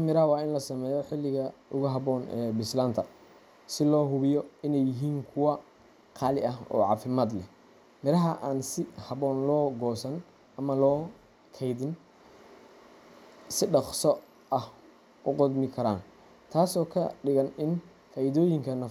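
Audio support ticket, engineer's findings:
No faults found in the speech recording; nothing to report on this ticket.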